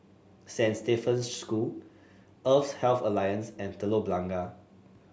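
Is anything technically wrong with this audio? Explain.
No, nothing technically wrong can be heard here.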